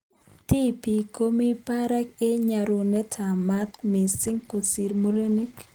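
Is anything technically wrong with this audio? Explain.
Yes. From 3.54 s to the end of the clip there is a call bitrate drop: the encoder's rate falls from 32 kbps to 15 kbps and stays at that floor for about 2.0 s. A lower bandwidth estimate forces the codec to spend far fewer bits, so detail is quantised coarsely and the top end is trimmed, making the speech duller, rougher and watery. Unlike packet loss, nothing drops out or repeats. The degradation is continuous rather than in bursts.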